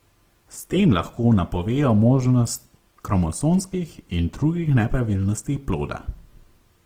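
Opus compression runs throughout, likely its CELT mode at around 16 kbps: bit-starved bands are refilled with folded or noise content, leaving the speech plainly grainy and rough.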